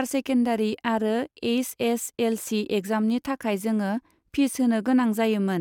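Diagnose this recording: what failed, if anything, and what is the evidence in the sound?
No faults can be heard.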